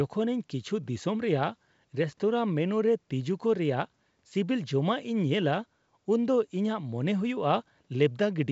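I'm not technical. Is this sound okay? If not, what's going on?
Yes, this speech comes through as expected for a wideband phone call using G.722 coding, which keeps the sound up to about 7.7 kHz, so it has a fuller, clearer tone than an ordinary phone line, and nothing in it stands out as a problem.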